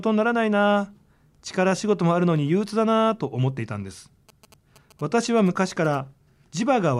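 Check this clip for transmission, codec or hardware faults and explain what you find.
There's one fault here: GSM signalling bursts from about 4.29 to 5.95 s. A 2G phone close to the recording chain is sending short groups of radio bursts, the kind it sends while signalling, and the audio circuitry is rectifying them into the signal. You hear a galloping dit-dit-dit of short buzzes at 217 Hz, sitting roughly 25 dB below the speech.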